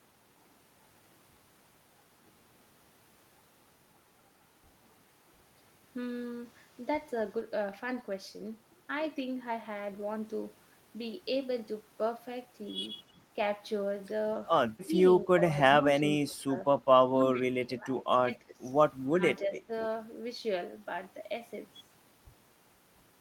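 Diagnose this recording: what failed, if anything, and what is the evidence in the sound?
The call-processing echo canceller likely caused speech suppressed in double talk, ducking the talker by about 10 to 25 dB at 14.85, 16.06, 17.1–18.6, 19.07 and 19.46 s.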